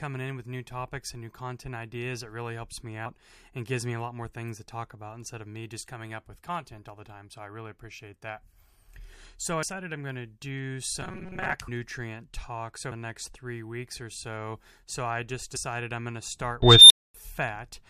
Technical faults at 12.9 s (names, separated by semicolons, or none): compressed frames skipped